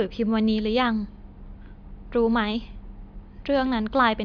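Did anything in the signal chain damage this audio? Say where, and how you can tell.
No, nothing damaged this audio.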